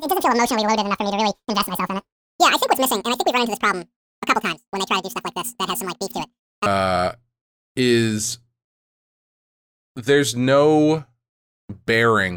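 A speech clip that, from the start to 6.66 s, plays at twice normal speed and an octave high, the pitch raised by 12 semitones, so the voice sounds chipmunk-like. The fault is audio read two samples at a time (double speed): the reader treats each pair of samples as one frame, as if the stream had two channels or twice-wide samples. This halves the duration and folds high frequencies back into the audible band.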